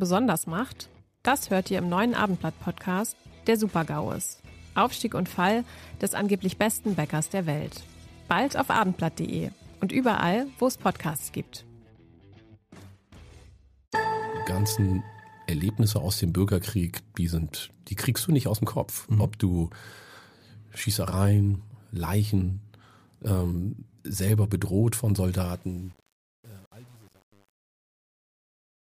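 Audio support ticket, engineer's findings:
Truncation distortion on the fade-out, 25.41 to 28.85 s, worst from 25.56 s. The tail turns gritty. Undithered gain stage, consistent with 8-bit resolution.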